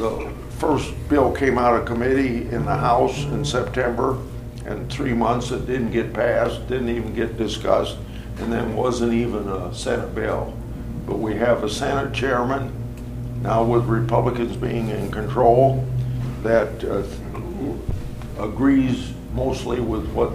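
Nothing in this one goes wrong on the technical side; there are no glitches, dropouts or other faults to point to anywhere along the way.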